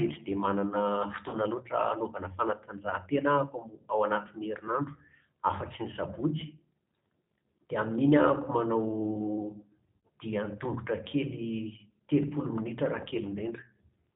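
Throughout, the G.729 codec at 8 kbit/s removes everything above 4 kHz, and its pulse-based excitation leaves the speech plainly rough and synthetic.

At 1.29–1.36 s and 9.97–9.99 s, VoIP packet loss concealed by the speech codec covers gaps of about 40 ms and 60 ms, heard as a buzzy tone or coloured noise that fades.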